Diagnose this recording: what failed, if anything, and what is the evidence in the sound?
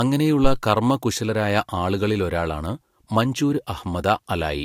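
The fault sits in the analogue input stage: a phantom power thump between 0.44 and 0.57 s. It is a single deep thump that dies away quickly, with a decay of about 29 ms. A supply was switched on or off on the live input, and that sudden DC step passed through the coupling capacitors into the signal path. Unlike a plosive or a handling bump, it is one isolated low-frequency step with no airflow or mechanical texture.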